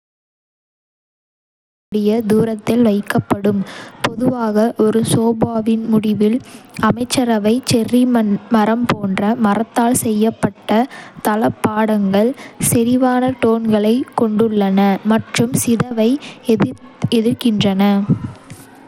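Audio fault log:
0.00 to 1.92 s, cut-off start: Digital silence runs until 1.92 s, where the speech bursts in mid-sound with no attack or fade just before "தூரத்தில் வைக்கப்படும்". The recording or stream began late and caught the speech already underway.
Throughout, Bluetooth SBC compression: A plainly audible gritty grain and unsteady upper detail cling to the speech, with nothing above 19.9 kHz. This is likely SBC's coarse sub-band quantisation at a low bit pool, which fits a rate near 96 kbps and starves the weaker high bands of bits.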